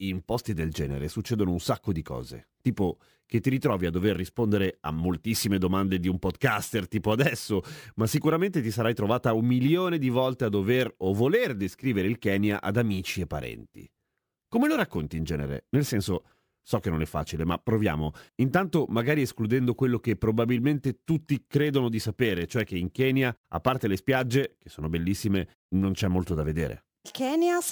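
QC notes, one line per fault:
Throughout: crude rate conversion. Samples were repeated without filtering, fitting a 32 to 48 kHz step, leaving a gritty inharmonic fizz roughly 25 dB down under loud, bright speech.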